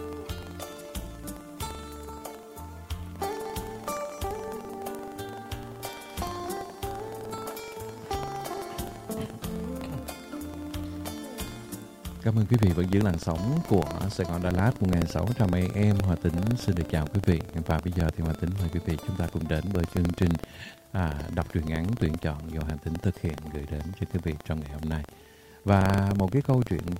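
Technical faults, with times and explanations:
throughout, buffer tearing: writer and hardware slipped on the ring buffer, splicing stale audio into every period, causing a 23.4 Hz rattle that fits a 2048-sample buffer.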